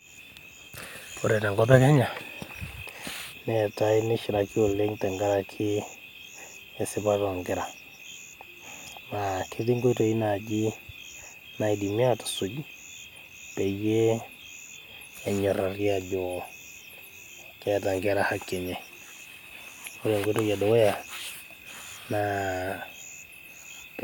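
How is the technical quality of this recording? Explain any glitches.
No technical glitches can be heard anywhere in the recording. The speech continues without any audible fault in the signal.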